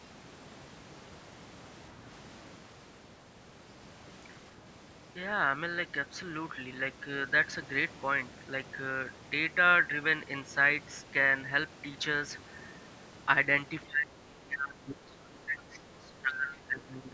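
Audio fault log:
13.83–17.13 s, speech suppressed in double talk: right at the end the speech starts ducking and breaking up, sinking as much as around 20 dB and dropping out in chunks for roughly three seconds in total. It sounds like the other end of the call was talking over it, and the echo canceller, unable to tell this talker apart from the loudspeaker echo, likely clamped down on everything, so the live speech got suppressed along with the echo.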